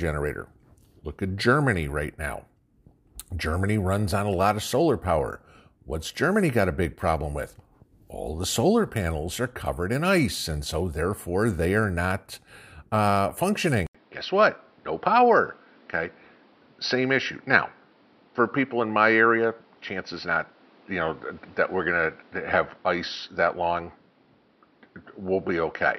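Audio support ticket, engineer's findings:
Input switched to a poorer device, 13.87 s to end of clip. Brief dropout of 80 ms at 13.87 s, then the sound turns dull and boxy, with nothing above 5.8 kHz. A new, different noise floor roughly 35 dB under the signal. Level essentially unchanged across the switch. Likely cause: capture moved mid-recording to a lower-grade microphone or a headset call profile, whose narrower band and own noise replace the original input's character.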